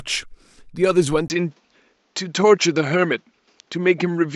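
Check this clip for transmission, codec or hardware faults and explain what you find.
One fault: at 1.28 s the input likely switched to a poorer device, whose narrower band cuts everything above 7.6 kHz. After a brief 20 ms gap, the speech sounds duller through to the end, with a faint new background noise and little change in level.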